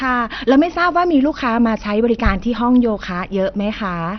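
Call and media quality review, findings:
Speech dull throughout, nothing above about 6.2 kHz; gurgling, granular distortion on all of it. Likely MP2 compression at a low rate, around 48 kbps: upper sub-bands starved of bits and switched off, remaining bands flickering and coarsely quantised. Heavy codec damage.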